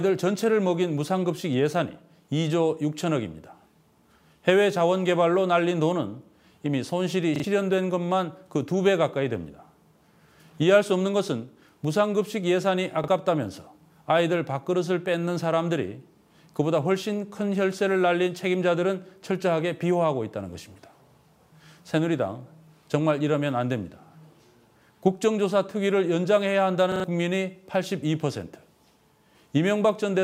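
At 7.36 to 7.44 s, 13.04 to 13.08 s and 26.92 to 27.04 s, new audio reached the device late, so it replayed its last buffer: a repeated buffer. A short slice, consistent with a 40 ms buffer, sounds again with hard joins, stuttering longest at 26.92 s.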